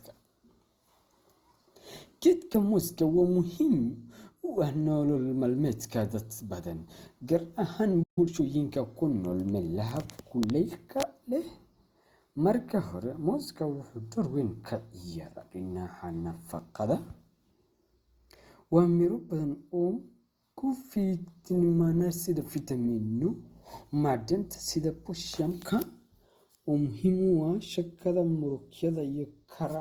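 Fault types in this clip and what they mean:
Opus compression: The whole clip has a grainy, rough texture. Tonal parts of the speech turn plainly noisy rather than swirling, which is likely the result of Opus coding in its music-oriented CELT mode at a low rate, one that fits roughly 24 kbps. The bandwidth stays full, with content reaching about 20.2 kHz. On a spectrogram the bands stay filled instead of showing holes, but the upper harmonics look smeared into noise-like texture.
playback stall: The speech cuts off in mid-flow at 8.03 s and returns at 8.18 s. That is a silence of about 137 ms, which most likely comes from the player running short of data or being blocked before recovering. On the waveform it shows as an abrupt flat line dropping straight from active signal to silence. On a spectrogram it shows as a clean vertical empty gap across all frequencies, with sharp edges on both sides.
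time-compressed catch-up: Right after the gap, from 8.18 s to 8.44 s, the player works off its backlog by playing the audio at about 1.5 times normal speed. It does this by cutting out short pieces and cross-fading across the joins, so pitch stays the same while the speech sounds hurried. On a spectrogram, syllable patterns in that stretch appear squeezed horizontally. Small discontinuities may show where the pieces join.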